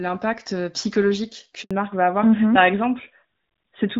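At 1.63 s a handover gap silences the speech for 80 ms as the call switches networks. The sound fades within milliseconds, leaving a flat waveform and a blank spectrogram column until 1.71 s.

From 1.71 s to the end comes a fallback to narrowband. The light HD Voice quality before the gap sounds like AMR-WB at around 12.65 kbit/s, and after it the sound fits AMR-NB at 12.2 kbit/s. Nothing appears above 4 kHz, so the spectrogram is cut flat at that line and the speech sounds duller and rougher.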